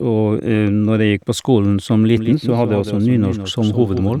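From 2.17 s, just after "på skolen som", the speech becomes a doubled audio track: a second, full-band copy of the same material runs roughly 150 ms behind the original, around 10 dB quieter. It switches on abruptly and carries on to the end. The lagging copy adds a dry slapback with no decay or room colour. The likely cause is a second capture through a slower path, or an edit holding two offset copies.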